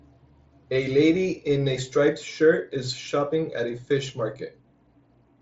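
No technical faults are present in the speech, which comes through a Bluetooth mSBC wideband headset link that leaves nothing above about 7.7 kHz and adds only the light graininess that codec brings to louder moments.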